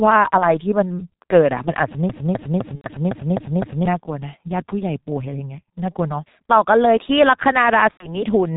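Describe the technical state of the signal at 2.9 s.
At 2.9 s the signal is just coming out of a burst of VoIP packet loss concealed by the speech codec, which runs from about 2.75 to 2.89 s. For roughly 90 ms, which fits three lost 30 ms frames, the decoder kept extending its last pitch and filter with falling gain, so the sound is stretched into a fading buzzy tone or coloured noise. The signal stays weak for a short while after 2.89 s as the decoder recovers.

Under this, the G.723.1 codec shapes the whole clip with heavy damage. The muffled, hoarse texture and smeared consonants point to a low-rate mode of around 6.3 kbit/s. Because the codec's voice model updates only once per 30 ms frame, fast changes blur together. A spectrogram shows almost no energy above 4 kHz and a coarse, block-like texture in time. The waveform looks smoothed, with the sharp transients of consonants rounded off.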